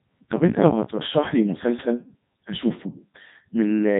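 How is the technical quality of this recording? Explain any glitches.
Technical quality is poor: the speech has passed through a very low-bitrate voice codec for its whole length.

Codec 2 vocoder, throughout the clip: the recording carries the heavy, synthetic character of Codec 2, and the detail level fits its 3.2 kbit/s mode. Instead of preserving the waveform, this vocoder transmits only pitch, voicing decisions, energy and a coarse spectral envelope, then rebuilds the voice from a bank of sine waves. The result sounds robotic and buzzy, with the natural texture of the original waveform lost.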